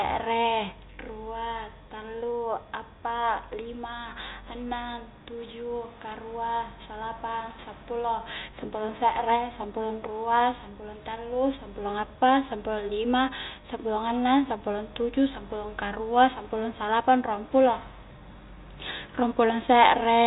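Speech over G.711 mu-law telephone coding, which leaves nothing above 3.8 kHz, and nothing is technically wrong with it.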